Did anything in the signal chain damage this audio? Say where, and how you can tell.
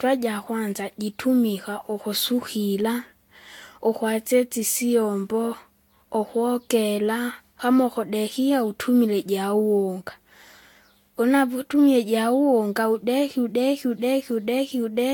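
Yes: generation loss at the codec stage, throughout the speech. The sound is swirly, hollow and smeared, with blurred attacks and nothing above 19 kHz, which is worse than a single pass near 70 kbit/s would give. It is likely about four successive lossy encodes, each requantising on a shifted frame grid.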